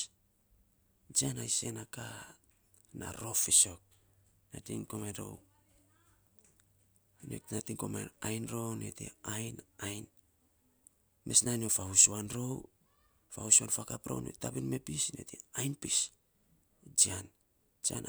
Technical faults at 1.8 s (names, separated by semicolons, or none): none